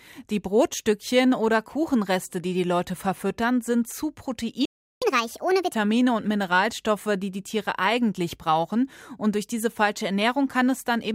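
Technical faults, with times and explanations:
4.65–5.02 s, playback stall: just after "verfüttern sind zu" the sound stops dead for about 362 ms, then resumes where it left off. Output went silent mid-flow, most likely because the player ran short of buffered data or its playback thread was briefly blocked.
5.02–5.74 s, catch-up at higher speed: on resuming, the speech runs at 1.5 times normal speed, with pitch raised by roughly seven semitones. The player is resampling its accumulated backlog to recover the lost time, so speed and pitch rise together before dropping back to normal.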